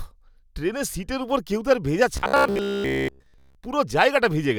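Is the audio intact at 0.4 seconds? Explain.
Yes, the speech at 0.4 seconds is intact, with no dropout, click, distortion or other fault audible at that moment.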